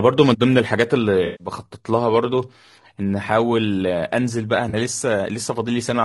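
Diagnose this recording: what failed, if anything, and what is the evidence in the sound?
The speech sounds rough and grainy throughout, with noise filling the gaps between harmonics and a thin, synthetic top band. This is codec-stage damage, likely from low-delay AAC compression such as AAC-ELD, whose short frames resolve pitch poorly at a low bitrate around 32 kbps.

Two smeared, noisy patches break the speech, a longer one from 1.25 to 1.47 s and a brief one from 4.69 to 4.75 s. This is AAC frame loss with concealment, at the network or decoder stage: the decoder rebuilt the missing audio from the last good spectrum, about 140 ms and 40 ms respectively.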